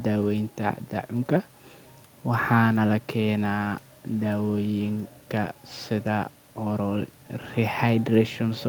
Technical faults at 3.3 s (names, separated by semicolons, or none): none